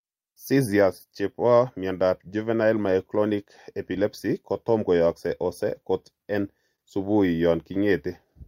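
Throughout the speech there is clock drift between sender and receiver. The sender's clock runs about 3 percent slower, so the receiver's jitter buffer keeps draining. On a spectrogram, syllable spacing looks subtly uneven rather than cleanly periodic, with no broadband gaps.

From 0.22 s to 8.45 s, repeated timing corrections compensate for that drift. The receiver repeatedly duplicates short pieces, playing at about 98 percent speed and adding roughly 150 ms overall. These sound like faint hiccups and a slightly dragging tempo. A waveform shows tiny repeated cycles at irregular spots.

At 6.76 to 6.80 s there is a short stall from a late packet. The buffer ran empty, and the receiver stretched the last sound for 26 ms until data arrived, with nothing lost. It is heard as a briefly held sound with a slight buzz or dip. A spectrogram shows a frozen, flat harmonic patch.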